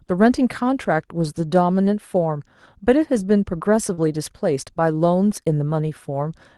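Speech heard over a call path that cuts off around 12 kHz, with one short disturbance. From 3.93 to 3.99 s there is short concealed packet loss: about 40 ms of audio never arrived in time, so the receiver extended the preceding sound over the gap and then blended back into real audio, leaving a brief smear or wobble where a short consonant may disappear. The last part of that stretch, 3.97 to 3.99 s, is a lost packet rebuilt from error correction. One 20 ms frame was recovered from the lower-quality redundant copy carried in the following packet, so there is no silence, but that frame sounds rougher and noisier than the speech around it.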